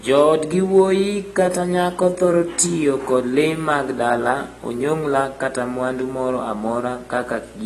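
Running the whole length is a video or display buzz: a 59.94 Hz field-rate buzz with hash above it and a 15.7 kHz line tone, roughly 30 dB below the speech. The speech also sounds dull and smeared, with fizzy sibilants and nothing above 12.1 kHz, likely from AAC compression at a low bitrate, around 32 kbps.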